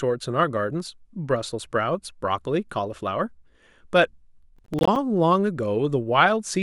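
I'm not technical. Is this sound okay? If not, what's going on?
No. From 4.56 to 4.96 s the speech breaks into gritty crackle, which is processor overload crackle: the computer missed many tiny audio deadlines in a row, leaving brief silent gaps.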